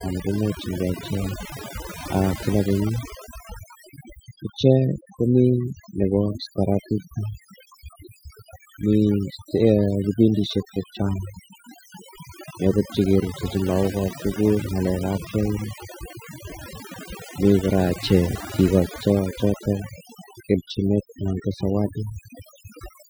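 Overdone noise removal runs through the whole of this speech recording, from start to finish. A noise reduction stage was pushed far too hard on a noisy source, so any frequency band sitting close to its noise estimate gets pulled right down or switched off. Quieter components of the voice fall below that threshold and vanish along with the noise. Between phrases the background drops to near silence dotted with twinkling specks.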